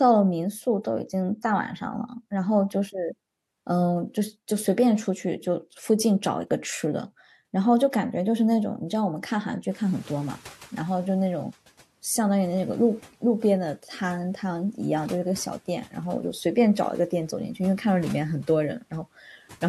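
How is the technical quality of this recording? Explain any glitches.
There is one glitch, tied to a sudden jump of about 23 dB in the room noise around 9.5 s. Noise suppressor catching up, 9.7 to 11.45 s: its noise estimate lags the jump, so the noise passes through louder, then sinks about 7 dB over 1.75 s.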